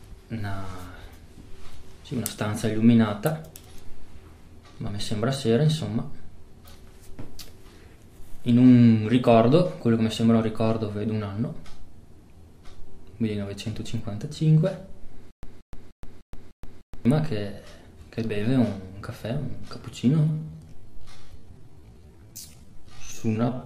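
From 15.31 to 17.05 s there's a stutter with silent gaps: a 177 ms burst plays six times at an even 301 ms pace, each followed by about 124 ms of dead digital silence. It's likely a playback stall replaying the last fragment on each retry, and whatever should have played there is simply gone.

Then from 20.11 s to the end, the audio is a time-stretched section, slowed to about 0.55x speed with the pitch held. The pace drops abruptly, likely from software repeating short pieces to fill a longer slot.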